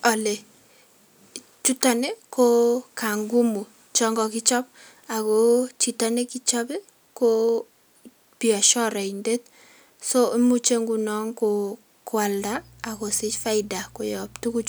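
Speech, with mains hum entering at 12.39 s and continuing to the end at 14.68 s. The hum is a steady low tone at 60 Hz, sitting roughly 30 dB below the speech, the kind of leakage a ground loop or a nearby transformer puts into the signal path. Its pitch stays fixed and its level steady whatever the talker does, which separates it from rumble or handling noise, both of which wander and are broadband rather than tonal.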